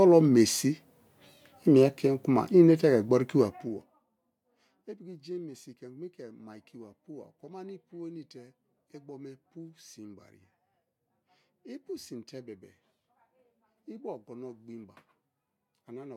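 From 3.41 to 4.05 s, a gain reduction on the speech is applied in coarse 2 dB jumps rather than as a continuous ramp, at around twenty steps a second, with no smoothing between them. The level falls by something like 25 dB over that stretch, and every jump puts a small discontinuity into the waveform. The result is zipper noise: a rapid ticking, zipping texture that rides on the voice for as long as the level is moving.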